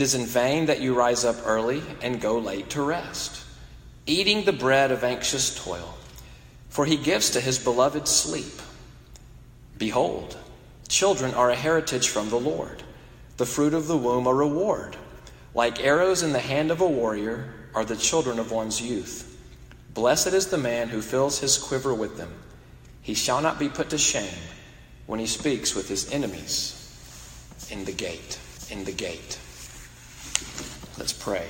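At 28.56 s a stream segment repeated: the player queued the same chunk of the stream twice, so the audio from 28.56 to 29.56 s plays again, adding about 1.0 s to the running time. A small blip marks the jump back to the start of the repeat. Unlike a short stutter or a buffer underrun, nothing falls silent and no brief fragment loops. A whole second of material returns intact, then playback carries on.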